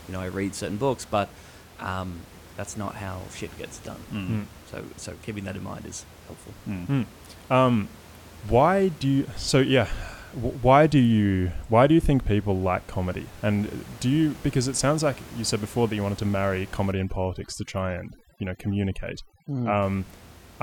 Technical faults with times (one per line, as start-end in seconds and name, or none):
16.92-19.82 overdone noise removal